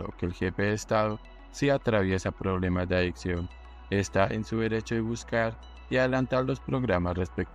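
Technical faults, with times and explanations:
Nothing stood out as a technical problem on listening.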